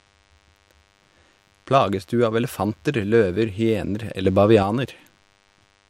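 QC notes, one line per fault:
Throughout: DECT cordless phone buzz. A thin, steady buzz sits under the speech the whole way, pulsing at 100 Hz with a stack of harmonics above it. That's the signature of a DECT handset or base nearby firing a radio burst every 10 ms, which the audio circuitry rectifies into the signal. It's well down, roughly 40 dB below the speech, so you catch it mostly in the gaps, but it never lets up.
4.25–4.63 s: sudden gain jump. Here the level steps up by about 6 dB with no ramp, and the background noise jumps right along with the speech, which tells you it's a gain change rather than the talker getting louder. It stays up for roughly 0.38 s before dropping back at 4.63 s. The likely cause is a digital gain setting or bit shift applied abruptly from one sample to the next.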